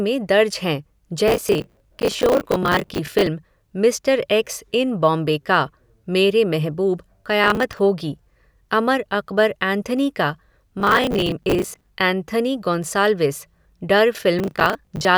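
Processor overload crackle breaks into the speech from 1.28 to 3.27 s, 7.44 to 7.79 s, 10.80 to 11.91 s and 14.39 to 15.05 s. Each time, the processor misses deadline after deadline on buffers of roughly 10 ms and replays stale audio, so a gritty tearing rides over the voice. The waveform shows hard-edged discontinuities repeating every 15 to 25 ms or so, and the spectrogram shows dense vertical broadband streaks through those spans.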